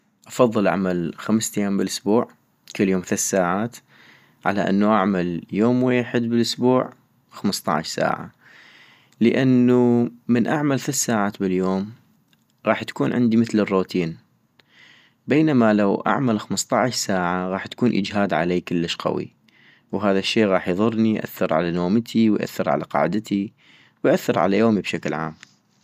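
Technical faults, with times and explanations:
No technical faults detected.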